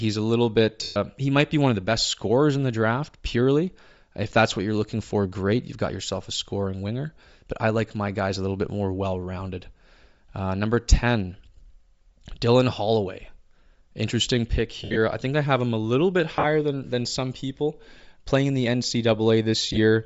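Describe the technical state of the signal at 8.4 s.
At 8.4 s the speech carries plainly audible codec damage that runs through the whole clip, likely Bluetooth LC3 compression. This transform codec works frame by frame, and here the artefacts fit 10 ms frames at a low rate near 32 kbps. It discards much upper-spectrum detail and fills the gaps with synthetic noise, giving voices a breathy, grainy edge. On a spectrogram, the upper band shows smeared, noise-like texture instead of clean harmonic lines.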